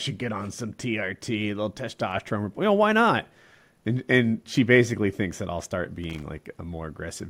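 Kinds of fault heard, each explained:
Loose connector crackle: a worn or dirty contact flickering open and closed, chopping the speech into an irregular scratchy burst from about 6.03 to 6.23 s. The waveform shows jagged dropouts and sharp spikes there, and the spectrogram shows ragged broadband vertical streaks.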